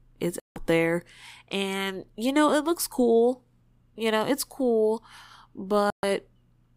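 Speech with two digital broadcast dropouts, at 0.40 to 0.56 s and 5.90 to 6.04 s, where the receiver muted on lost frames and the sound vanishes, showing as flat waveform and blank spectrogram gaps.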